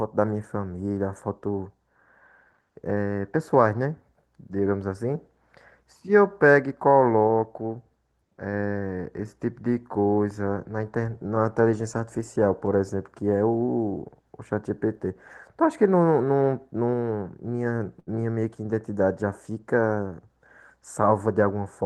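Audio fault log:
17.99–18.09 s, short stall from a late packet: a packet arrived after its slot and the jitter buffer ran empty. The receiver stretched the last sound by 74 ms until the packet came, then resumed. Nothing drops out, but that sound lingers with a faint buzzy dip.
20.81–21.66 s, jitter buffer speed-up: surplus audio had built up in the jitter buffer, so the receiver repeatedly trimmed pitch-period slices, around 70 ms in all. The speech runs about 6% fast at unchanged pitch and sounds slightly hurried.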